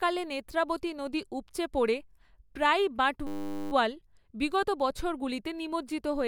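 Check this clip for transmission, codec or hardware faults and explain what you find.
There's one fault, a system hang loop. Right after "নদী উপচে পড়ে প্রায়ই", from 3.27 to 3.72 s, the driver stalled while the hardware kept replaying a 10 ms slice of its ring buffer about 45 times. That gives a steady 100 Hz buzz in place of the speech, and almost no audio is lost.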